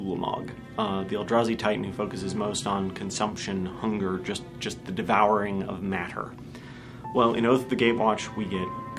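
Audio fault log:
No faults detected.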